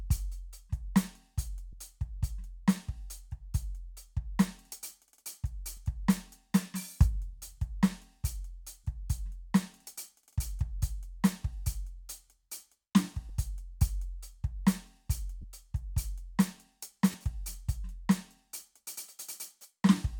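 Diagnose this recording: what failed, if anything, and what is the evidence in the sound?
Lost LE Audio frames at 1.72 s, 5.77 s, 8.84 to 8.86 s, 13.29 s, 15.41 to 15.44 s and 17.12 to 17.14 s. These are brief dropouts in the Bluetooth link rather than in the music itself. Each gap lasts 10 to 30 ms, which fits one to three 10 ms frames. During each gap the LC3 decoder repeats the last spectrum with scrambled phase, so sustained tones turn briefly into a noisy smear before normal decoding resumes.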